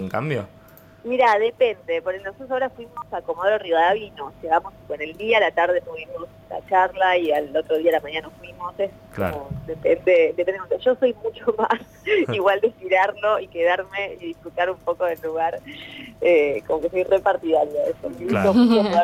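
Gain pumping runs through the whole recording. The level keeps moving. The swing is around 5 dB. Loud and soft moments sit closer together than they should, so the sound feels squashed and breathless. The likely cause is input gain set far too high, with a fast limiter or compressor pulling the level down on every peak.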